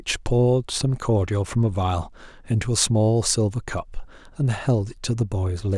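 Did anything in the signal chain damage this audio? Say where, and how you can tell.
No, nothing in this speech recording stood out as damage from any stage of the signal chain on listening.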